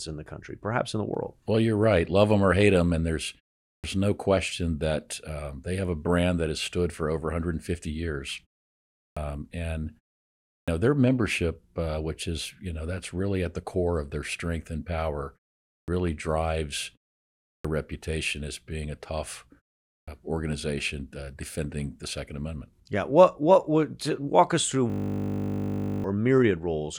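At 3.7, 9.02, 10.54, 15.72, 17.49 and 19.92 s the speech has a clipped start after a pause. Each time, after a gap of roughly 0.4 to 0.6 s, the output device has gone idle and only catches the signal again about 140 to 160 ms late. The first sounds of the next stretch are cut off, so it snaps in out of silence, as at 3.7 s after "hate them and there's" and at 10.54 s before "know their membership uh". This differs from muted pauses, which only quiet the background, because actual speech is lost at the onset.

From 24.9 to 26.04 s a system hang loop takes over. The driver stalled while the hardware kept replaying a single 20 ms piece of its buffer, about 57 times. That produces a steady 50 Hz buzz in place of roughly a second of speech. Unlike a dropout, which goes silent, or a stutter that moves forward, this sound holds one fixed, mechanical tone.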